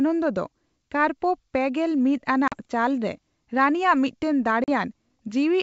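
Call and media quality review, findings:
Packet loss on the ADPCM (G.722) call: hard silent gaps at 2.48–2.56 s and 4.64–4.69 s, each about 40 ms lost, roughly two packets. Decoder predictor and step size desync, so speech returns slightly distorted after each gap, settling within tens of ms. That separates it from a plain dropout.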